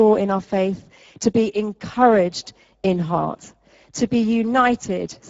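Throughout the speech, Speex codec damage is plainly audible. The voice sounds hoarse, grainy and noisy, because the CELP model spends too few bits describing the excitation and approximates it roughly, which fits a low setting of around 10 kbps. Nothing reaches above 7.7 kHz. What sets this apart from a low-bitrate music codec is the lack of swirly, watery smearing: the damage sits in the voice source itself, while the band above 4 kHz is only a shaped noise fill.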